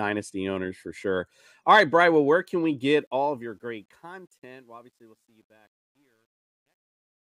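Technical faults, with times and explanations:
2.91–7.27 s, truncation distortion on a fade: the fade-out that begins just after "where can we" runs through a gain stage that keeps too few bits and adds no dither, with coarse steps that fit an 11-bit word length. As the level drops, the waveform collapses into a few square steps, so from about 4.6 s to the end at 7.27 s the fading speech turns gritty.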